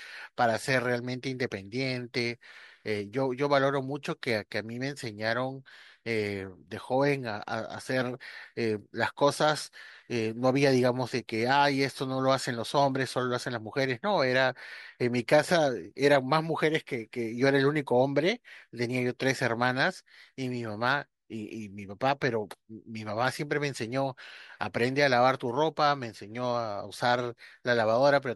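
Nothing stood out as a technical fault on listening to the speech in this recording.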